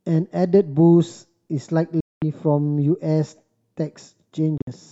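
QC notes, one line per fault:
2.00–2.22 s: Bluetooth dropout. The speech cuts abruptly to silence for about 213 ms. It then resumes further along, as if it had kept playing through the gap. This likely comes from wireless packets arriving too late and being discarded.
4.58–4.71 s: Bluetooth dropout, broken up. Short holes, totalling 80 ms, are spread across 133 ms. The longest hole lasts 53 ms. The result is a choppy stutter rather than one clean gap. This likely comes from intermittent late packets being dropped.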